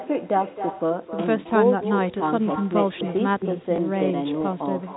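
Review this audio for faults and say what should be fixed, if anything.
Echo with no canceller runs through the whole recording. Every phrase is followed, roughly a third of a second later, by a second copy about 10 dB quieter and thinner. The far end is playing the call through a loudspeaker, and its microphone picks that up and sends it back over the network with nothing to subtract it. To prevent it, enable acoustic echo cancellation on the far-end device or have that participant use a headset.

Packet loss with last packet repeated occurs at 3.76 to 3.78 s. A 20 ms gap was filled by replaying the preceding audio, producing a small blip. The length fits a single lost 20 ms packet. To prevent it, improve the network path or use a receiver with proper packet loss concealment instead of simple repetition.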